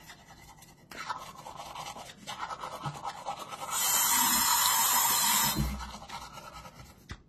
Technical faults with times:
0.00-7.28 transcoding between lossy codecs

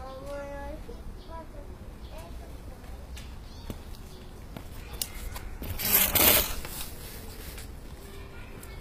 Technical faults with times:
0.00-8.80 HE-AAC compression

